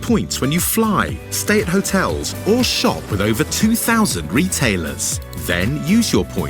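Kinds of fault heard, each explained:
No faults are audible anywhere in the audio.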